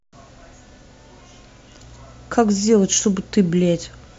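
A speech recording picks up mains hum from 1.83 s until 4.00 s: a steady 60 Hz tone, roughly 30 dB below the speech, sits under everything in that stretch. Power-line current is leaking into the signal path, as a ground loop or a nearby transformer would cause. On a spectrogram it appears as a thin, unbroken horizontal line at 60 Hz starting at 1.83 s, and the waveform gains a fine periodic ripple between syllables.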